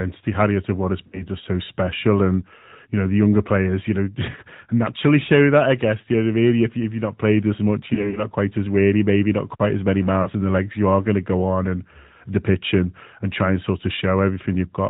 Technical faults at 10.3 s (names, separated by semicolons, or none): AMR narrowband mobile codec; lost AMR speech frames